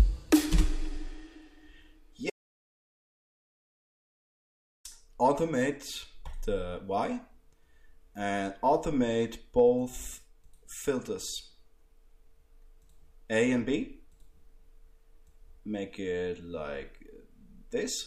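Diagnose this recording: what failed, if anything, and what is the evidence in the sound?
Audio dropout to silence, 2.3 s to 4.85 s: the sound cuts off mid-flow and resumes 2.5 s later, with no room tone between. The waveform flatlines to silence, and the spectrogram shows a blank band. Likely an input device or link was lost while recording continued writing silence.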